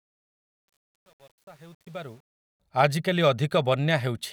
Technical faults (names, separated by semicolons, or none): truncation distortion on a fade